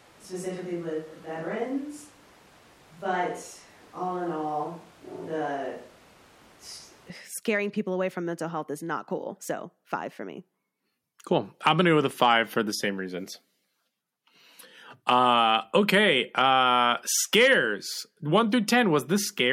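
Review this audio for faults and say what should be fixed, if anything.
From the start to 7.10 s, the speech has the sound of a switch to a distant microphone. It is roomy and hollow, with thin bass. Room noise sits about 25 dB below the speech. The level stays about the same. At 7.10 s the sound snaps back to close and full, just before "scaring people away from". The close microphone's signal likely dropped out, so a far pickup carried the speech. This opening section should be re-recorded or replaced with close-microphone audio.

Monitoring the close microphone on headphones throughout, with a backup recorder running, prevents this.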